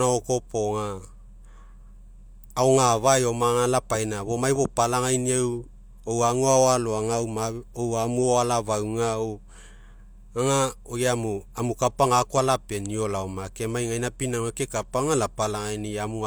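Listening through the recording, nothing stood out as a technical fault at any point.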